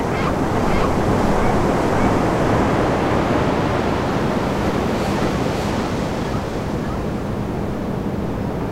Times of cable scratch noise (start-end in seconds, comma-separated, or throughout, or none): none